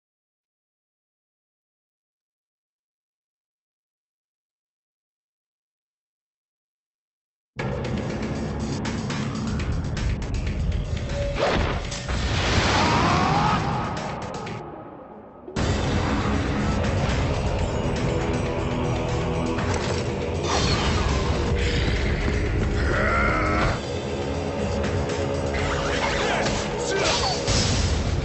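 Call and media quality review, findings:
No faults found in audio.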